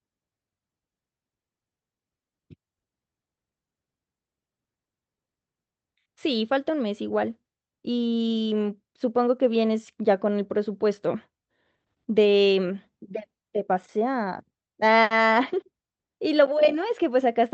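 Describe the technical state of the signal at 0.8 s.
At 0.8 s the speech is intact, with no fault present, only the ordinary coding character of the call path it travelled through.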